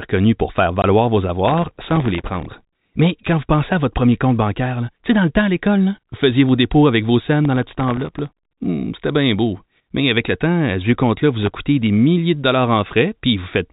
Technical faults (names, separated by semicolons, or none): packet loss filled with silence; processor overload crackle